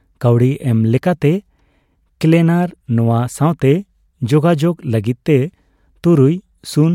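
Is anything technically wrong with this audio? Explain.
No, nothing technically wrong can be heard in this speech recording; the signal holds steady throughout.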